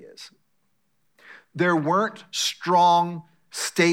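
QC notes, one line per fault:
QC notes: no fault.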